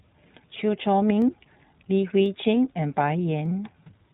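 Speech, coded throughout with the iLBC codec: nothing passes above 4 kHz, and the audibly rough, synthetic texture fits 20 ms frames at around 15.2 kbps. Sharp single clicks at 1.22, 2.26 and 3.46 s are likely dropped samples, where a fraction of a millisecond vanishes and the waveform jumps.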